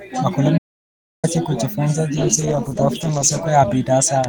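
At 0.58 s the speech cuts out to silence, with no room tone, and returns at 1.24 s, so about 0.65 s of audio is missing. This audio dropout to silence likely came from the input being lost while the recorder kept writing silence.

From 2.16 s to the end, a call bitrate drop makes the speech rough and muffled as high frequencies fall away. The coarser coding points to the encoder being throttled from around 32 kbps to roughly 13 kbps, with the worst stretch lasting about 1.1 s.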